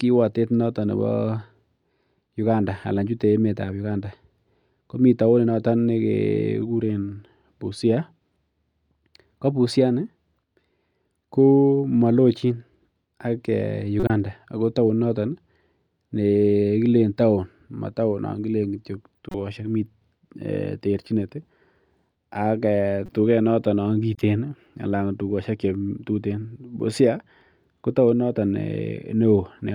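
At 14.00 to 14.10 s, 19.15 to 19.35 s, 23.06 to 23.09 s and 24.15 to 24.21 s the speech is broken by short chirps and noise bursts: each is a corrupt frame decoded. Damaged bitstream data was played anyway, so misread gains and codes scatter energy across wrong frequencies. Burst lengths suggest a few frames each, several at 19.15 s. The first is loudest, peaking near -5 dBFS; the last two sit around -25 dBFS.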